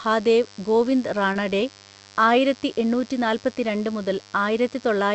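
Mains buzz runs under the entire speech clip: a raspy 50 Hz buzz about 25 dB below the speech. Its sharp harmonics climb far above 50 Hz, so it sounds gritty, not like a smooth hum.

From 1.33 to 1.37 s, a short concealed packet loss leaves a brief smear where a few hundredths of a second never arrived and the call decoder extended the preceding sound. It is a wobble, not a silent dropout.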